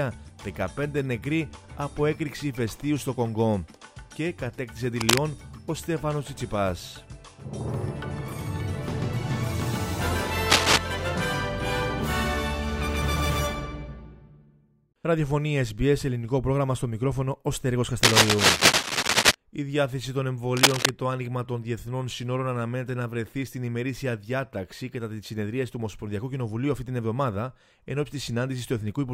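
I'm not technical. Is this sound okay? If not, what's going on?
No. Scratchy, rustling bursts of noise sit over the sound at 5.0, 10.5–10.8, 18.0–19.3 and 20.6–20.9 seconds: cable scratch noise, likely from a worn cable or connector being moved. Unlike a single click, each lasts a moment as uneven crackle.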